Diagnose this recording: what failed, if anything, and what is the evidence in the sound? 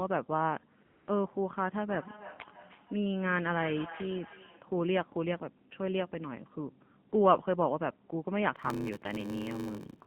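Buzzy, synthetic speech confined to roughly 150 Hz to 3.4 kHz throughout: the AMR narrowband mobile codec at 7.4 kbps, with plainly audible coding damage.

At 0.86–1.08 s and again at 7.1 s, the background becomes smooth, steady hiss that switches in and out. This is AMR comfort noise filling gaps with no speech frames.

From 1.87 to 4.73 s, the speech returns about every 0.3 s, thinner and ringing, peaking around 14 dB below the speech. This is feedback echo between two devices in call processing.

From 8.55 s to the end, a 93.8 Hz buzz appears and the audio slows to 0.861 speed with its timbre intact. This is a buffer-stage block size mismatch (padded), consistent with 512-sample reads.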